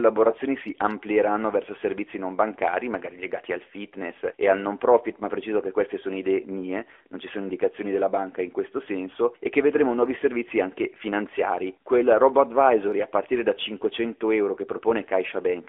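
A speech recording carried through the AMR narrowband mobile codec for its whole length: everything above roughly 3.4 kHz and below 300 Hz is gone, and the pulse-driven vocal-tract model leaves an audibly buzzy, synthetic edge, which fits the 10.2 kbps mode.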